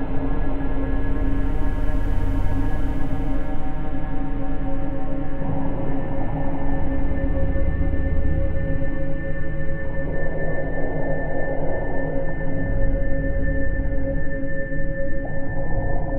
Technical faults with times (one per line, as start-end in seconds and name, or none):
none